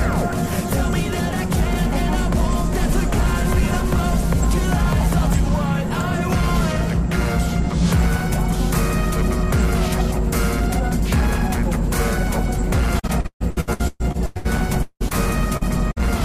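The audio has repeated packet loss, giving a robotic sound from 12.99 to 14.47 s and again from 14.83 to 15.15 s. Holes keep appearing, each patched by stretching the last sound. About half the first stretch and nearly two thirds of the second are filled this way, with single gaps up to 140 ms and 177 ms. From 15.57 to 15.64 s, a short concealed packet loss leaves a brief smear where about 40 ms never arrived and was bridged by continuing the previous sound. Then a burst of packet loss hits from 15.91 to 15.98 s. About 60 ms is missing, covered by a fading continuation before the audio resumes further on.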